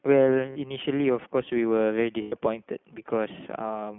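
The speech runs through the iLBC codec for its whole length. The band is cut to about 150 Hz to 3.4 kHz, so there is no air or sibilant sparkle above that. iLBC codes each 20 ms frame on its own, and the voice comes out clear but rough and a little synthetic. The coding damage is plainly audible, which fits the 15.2 kbps mode.

At 0.50 s comes the first case of lost iLBC frames. It lasts until 0.57 s, a gap of about 60 ms, which points to three dropped 20 ms frames. The decoder fills the hole by repeating the last pitch cycle with noise mixed in. It sounds like a brief held, buzzy vowel. Because iLBC frames stand alone, the voice snaps back right away.

A second loss runs from 2.22 to 2.34 s, about 100 ms. That fits five missing frames. The held vowel is longer here and fades as the concealment stretches.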